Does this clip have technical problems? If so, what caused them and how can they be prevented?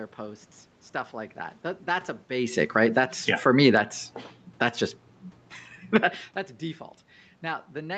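Yes. Automatic gain falling occurs from 2.6 to 4.76 s, right after "that that that's a", and again from 5.8 to 6.11 s. Each time the talker had moved, around 2.5 s and again near 6 s. The call's gain control judged the input too loud and eased its gain down by about 4 dB, so the voice starts loud and then sinks together with the room noise behind it. To prevent this, keep a steady distance from the microphone or set a fixed input gain instead of relying on automatic control.

Automatic gain rising follows from 6.02 to 6.4 s. As the talker moved away from the microphone, the input dropped by about 21 dB. The gain control responded by pushing its gain back up by about 4 dB, so the voice and the room noise swell together rather than the voice alone getting louder. This recovery only partly offsets the drop, and it overlaps the end of the second fall. Keeping the talker's position stable, or disabling automatic gain in favour of a well-set manual level, would prevent it.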